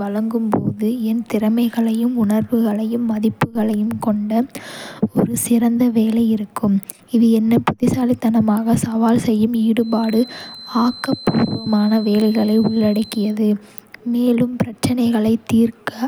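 From 9.76 to 13.38 s, a feedback whistle sits behind the speech. It's a thin, steady tone at 4.1 kHz, swelling and fading slowly, roughly 20 dB below the voice. A loudspeaker-to-microphone loop hovering at the edge of feedback is the likely cause.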